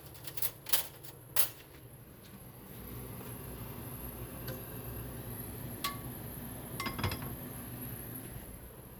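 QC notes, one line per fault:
No audible faults found in this recording.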